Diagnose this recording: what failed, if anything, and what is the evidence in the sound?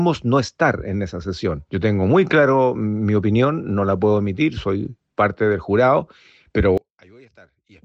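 A polarity reversal on one channel, likely from swapped analogue wiring, leaves one channel inverted. From 6.78 s to 7.84 s the mono sum drops by about 31 dB: the shared centre content and low end cancel, leaving only a faint residue of the inter-channel differences.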